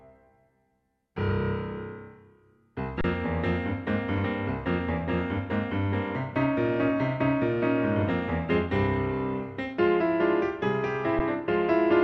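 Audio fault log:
3.01–3.04 s and 11.19 s: underrun with held sample. The output buffer ran dry for 30 ms, then for 10 ms, and the converter held its last value, so the waveform goes flat. Unlike a zero-fill dropout, there's barely a click, and playback resumes softly where it paused, with nothing lost.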